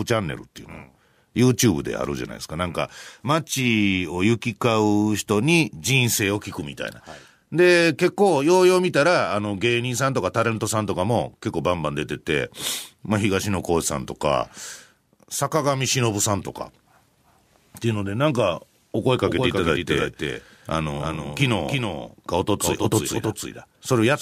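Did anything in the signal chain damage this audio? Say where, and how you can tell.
Yes. A doubled audio track begins abruptly at 19.26 s and runs to the end of the clip: a second full-band copy of the speech trails the original by roughly a third of a second, about 5 dB quieter. It carries no decay or room colour, so it isn't an acoustic echo. The likely cause is at the driver or routing stage, where the same signal is captured a second time through a slower path and summed back in.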